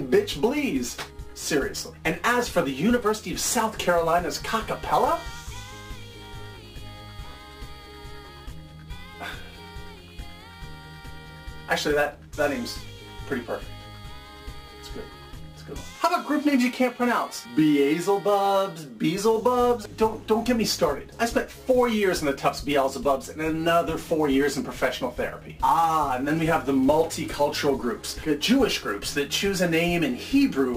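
Sample clock jitter runs throughout: timing wobbling by around ten microseconds adds a roughness about 20 dB down that swells on loud, bright passages and vanishes in silence, unlike steady hiss.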